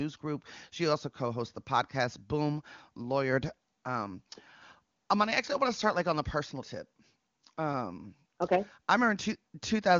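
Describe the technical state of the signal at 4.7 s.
At 4.7 s the speech is intact, passing through the AMR wideband (HD Voice) codec with its band ending at about 7.3 kHz and no fault present at that moment.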